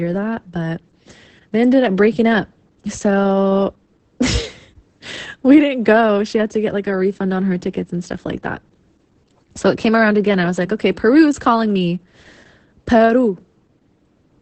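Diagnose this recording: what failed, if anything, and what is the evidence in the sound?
Codec stage: Opus voice compression throughout. Speech sounds hoarse and robotic, nothing above 8.6 kHz; coarse excitation, fitting about 10 kbps, separates it from plain filtering.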